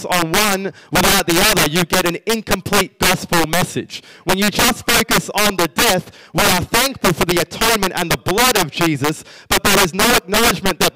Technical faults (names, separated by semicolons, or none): integer overflow